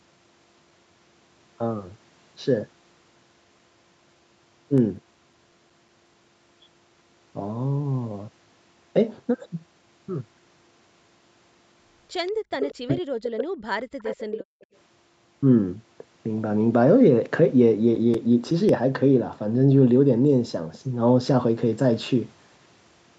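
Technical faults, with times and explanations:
4.78–6.44 s and 17.59–18.69 s, CD scratch ticks: ten ticks in the first run and seven in the second, about six a second, each a few milliseconds long. The steady rate follows the disc's rotation, where uncorrectable data was patched over. Random network dropouts would not keep such a rhythm.
12.27–12.32 s, 12.52–12.95 s, 13.99–14.44 s and 14.61–14.66 s, echo leak: a distinct copy of the far side returns 189 ms late, at about −35, −10, −15 and −35 dB relative to the speech. This is likely residue the echo canceller missed. The fixed delay and discrete repeat set it apart from room reverberation.
12.32–12.44 s and 14.44–14.68 s, background gated by the echo canceller: the room sound falls by about 40 dB for roughly 100 ms, then roughly 200 ms, and then returns. The canceller clamped the microphone while the loudspeaker played. Only the ambience vanishes, and no talker is cut.
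12.72–13.81 s, speech suppressed in double talk: the near talker's voice dips in pieces by up to about 40 dB across roughly a second while the other side is also talking. The likely cause is the canceller confusing that voice with loudspeaker echo. Unlike the gating, the voice itself is attenuated.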